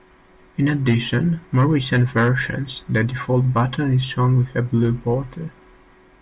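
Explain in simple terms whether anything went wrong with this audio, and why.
Nothing went wrong with this speech recording, as no technical faults can be heard anywhere in it. The sound holds steady throughout, so there is nothing that needs fixing.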